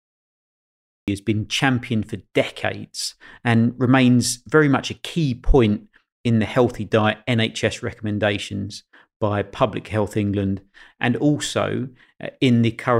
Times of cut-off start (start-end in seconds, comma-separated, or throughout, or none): 0.00-1.08